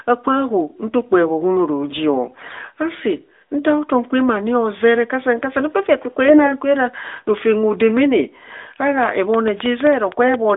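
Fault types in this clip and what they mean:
AMR bit errors: Two short bursts where the speech keeps its rough pitch and loudness but turns hoarse, scratchy and gargly, from 2.26 to 2.56 s and again from 6.26 to 6.53 s. The first has the heavier error rate, about 7% against 3%. The less protected bits of the AMR frames arrived flipped while the check on the key bits still passed, so misplaced excitation pulses and slightly wrong pitch, gain and spectral values were decoded as valid.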